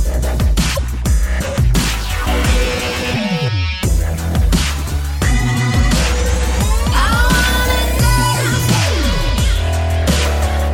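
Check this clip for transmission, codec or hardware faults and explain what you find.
One codec fault is audible, near the start of the clip.

From 0.72 to 0.79 s there is damaged data in a compressed stream. For about 70 ms the decoder receives corrupted bytes, misreads or rejects those frames, loses sync and hunts for the next valid frame header. The result is a short chirp, squawk, click or brief hole in the audio. On a spectrogram it shows as a narrow vertical block of odd energy or a gap that doesn't match the surrounding content. The waveform shows an abrupt, malformed segment with hard edges at both ends.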